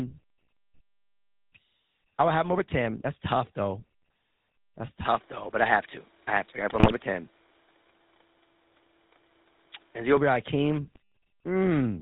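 Across the whole recording the speech has a buzzy, gravelly roughness and no top end, the plainly audible signature of the GSM full-rate codec. At 13 kbps it models the vocal tract and drives it with a coarse, regularly spaced pulse excitation, discarding everything above 4 kHz.

From 5.05 s to 10.17 s the sound turns duller and boxier with no gap at the transition, gains a faint new noise floor and shifts about 5 dB in level. It clears again at the end of that stretch. The likely cause is the input switching to a poorer device with a narrower band.

From 6.69 s to 6.93 s the speech breaks into squawks, pops and gargling. A milder burst of the same damage follows from 10.82 s to 11.0 s. These are GSM bit errors: corrupted filter, pitch or gain values reached the decoder, bending the spectrum or spiking the level frame by frame.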